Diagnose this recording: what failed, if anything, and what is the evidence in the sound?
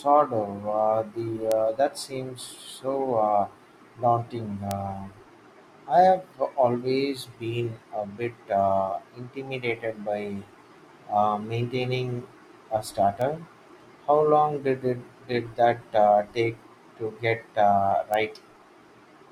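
Bit error spikes in storage or a digital link. Sharp broadband ticks at 1.52, 4.71 after "seems so uh daunting", 13.22 after "uh maintaining a", and 18.14 after "get uh". Each reaches about -8 dBFS, the third about -14 dBFS. A flipped bit jumps one or two samples, then returns.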